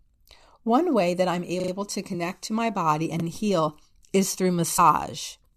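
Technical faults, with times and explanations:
1.6–1.72 s, repeated buffer: a 40 ms stretch plays three extra times with hard joins, giving a rapid stutter as playback repeated stale audio.
2.13 s, compressed frames skipped: just before "to my body", roughly two 21.3 ms frames drop, a jump of about 40 ms.
3.2–3.24 s, repeated buffer: between "to my body" and "heal is through", one 40 ms buffer replays once, a brief hard-edged stutter from late-arriving audio.
4.78 s, compressed frames skipped: after "heal is through", around two frames are missing, skipping roughly 40 ms.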